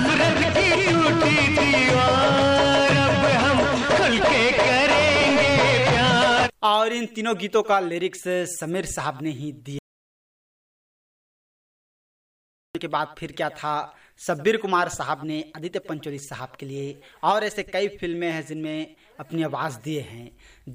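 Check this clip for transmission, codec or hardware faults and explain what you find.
There's one real problem here. From 9.79 to 12.75 s there's an audio dropout to silence: the sound cuts off mid-flow and comes back about 3 s later. The input was likely lost, through a disconnected device or failed link, while recording continued writing silence, so the gap is dead silence with no room tone and nothing from that stretch survives.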